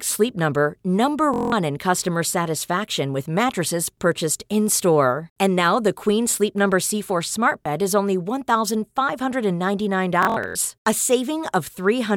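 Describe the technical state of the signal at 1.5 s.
A machine-gun buzz from 1.34 to 1.52 s is Bluetooth stutter: the receiver replays its last short slice while 186 ms of packets go missing.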